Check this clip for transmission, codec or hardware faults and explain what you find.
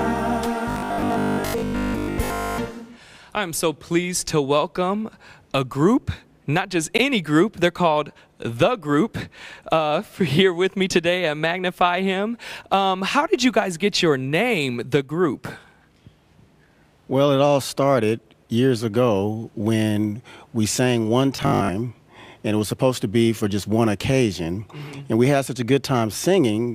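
Two kinds of fault turn up, a robotic buzz in two spots and a pair of chunk-join stutters.

Robotic sound from repeated short buffers, from 0.70 to 2.60 s and again from 21.37 to 21.69 s. The audio collapses into a stiff, metallic buzz at 50 Hz that only loosely tracks what's underneath. The likely cause is audio arriving too late, so the playback side keeps looping the last short buffer, about 20 ms given that pitch, while most of the real audio in those stretches gets skipped.

Overlapping chunks, at 6.98 to 7.02 s and 17.02 to 17.06 s. Each is a quick stutter where 44 ms of audio plays twice. They sit 10 s apart, which points to the audio being handled in 10 s blocks, with each new block starting a touch before the previous one finished, so the seam gets doubled.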